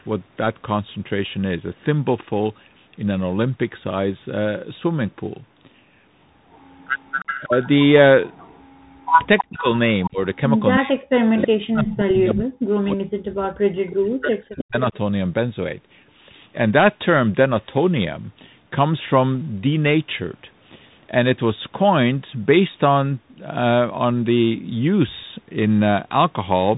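The whole clip carries the Bluetooth CVSD headset codec. Nothing above 3.8 kHz gets through. The one-bit delta coder cannot track loud, fast rises, so s sounds turn scratchy. A granular hiss sits under the speech throughout.

From 6.51 to 10.36 s there is an echo leak. A copy of the speech returns 318 ms late, about 15 dB below the speech. The likely cause is a loudspeaker side whose echo canceller let its own pickup through. It comes back from 11.41 to 12.34 s, much louder, only about 5 dB down. It returns again from 13.55 to 14.97 s, about 15 dB down.

From 7.41 to 7.53 s the speech dips by about 20 dB for roughly a tenth of a second. This is speech suppressed in double talk, likely the canceller turning the talker down while both sides speak. A longer bout runs from 9.42 to 14.93 s. There the drops reach about 40 dB and affect roughly four seconds in all.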